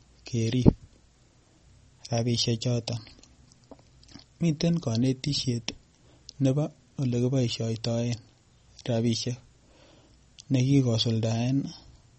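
Speech recording, likely squeezed through heavy MP3 compression at what sounds like about 32 kbps, leaving nothing above 8.3 kHz and plainly audible codec damage throughout.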